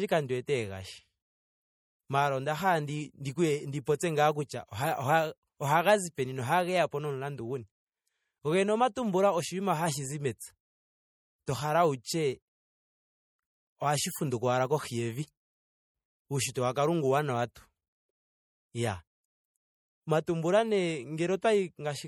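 All the way through, the speech has a watery, swirly quality, with metallic chirps on s sounds and smeared attacks. That's likely MP3 compression at a low bitrate, around 48 kbps, where weak frequency lines drop in and out between frames.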